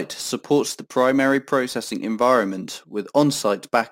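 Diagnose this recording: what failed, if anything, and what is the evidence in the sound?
Gritty, inharmonic fizz follows loud, bright speech throughout, roughly 25 dB down: crude rate conversion repeating samples unfiltered, consistent with a 44.1 to 48 kHz change.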